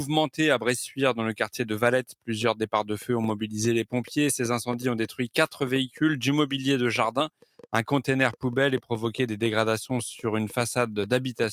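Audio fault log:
7.29–7.66 s, sound cut by the noise suppressor: the sound sinks, falling by about 18 dB at its deepest for roughly 300 ms, then returns. The suppressor mistook this passage for noise and turned it down harder than the surrounding audio.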